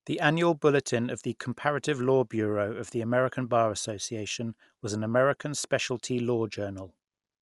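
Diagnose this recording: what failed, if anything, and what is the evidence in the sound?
The codec stage failed: the speech was most likely squeezed through Dolby Digital compression at a low rate, one that fits roughly 64 kbps. Throughout, nothing survives above 11.5 kHz, so the speech sounds dull. Lines left without mantissa bits are refilled with dither noise, giving plainly audible rough, fluttering grain.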